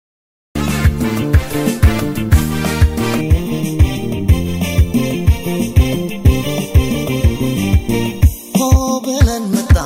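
The audio begins with a cut-off start. Digital silence runs from 0 to 0.55 s. Then the sound enters abruptly, already in progress. The recording or stream began late, so the opening of this sound was never captured. There is no natural attack and no fade-in. The level jumps from nothing at once. That sudden onset at 0.55 s is what gives the cut its hard, clipped feel.

From 3.21 s to 9.20 s the tone turns hollow and phasey. This is channel delay causing comb filtering. One channel arrives about a third of a millisecond late. When the two are summed to mono, content shared by both cancels at evenly spaced frequencies. The first notch sits around 1.5 kHz, with further notches above it. The result is a hollow, slightly tubular colour that stays fixed throughout.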